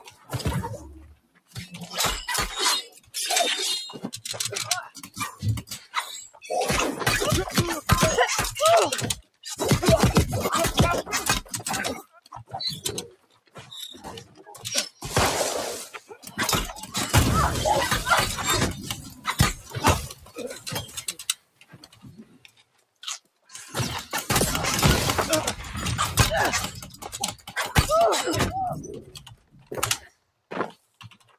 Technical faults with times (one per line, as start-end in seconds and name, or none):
0.00-31.38 noise suppressor applied to music or sounds
0.00-1.75 sound cut by the noise suppressor
2.88-6.47 sound cut by the noise suppressor
9.19-9.47 sound cut by the noise suppressor
11.43-16.95 sound cut by the noise suppressor
18.98-23.53 sound cut by the noise suppressor
26.89-27.54 sound cut by the noise suppressor
29.01-31.38 sound cut by the noise suppressor